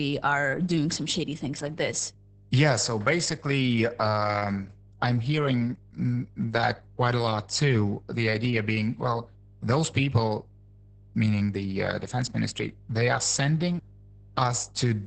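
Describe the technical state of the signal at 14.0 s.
At 14.0 s, as across the whole clip, mains hum sits under the speech: a steady 50 Hz tone with low harmonics, picked up from the power line through a ground loop or nearby transformer, roughly 25 dB below the speech. Its fixed pitch and unchanging level separate it from rumble or traffic noise, which wander.

The speech at that moment also carries heavy Opus voice compression damage. The linear-prediction coder has coded the excitation coarsely and cut the band off at 8 kHz, which fits a bitrate near 10 kbps. The speech sounds muffled, hoarse and slightly robotic. That combination of a hard band limit with a buzzy, synthetic quality points to a speech codec rather than simple low-pass filtering.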